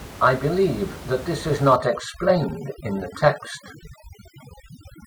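From 1.76 s to the end, this speech clip shows overdone noise removal. A noise reduction process set too aggressively is clamping individual frequency bands down whenever their level sits close to its noise estimate. The background in the gaps drops and breaks up into twinkling, chirpy specks, and the quieter parts of the speech are stripped out along with the noise. Room noise, about 15 dB below the speech, is part of the recording.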